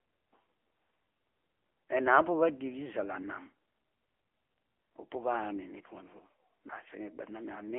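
From start to finish the speech has been squeezed through the AMR narrowband mobile codec: it sits in a telephone band of roughly 250 Hz to 3.4 kHz with nothing above 3.6 kHz, and the low bitrate, which fits around 8 kbps, leaves it plainly buzzy and synthetic.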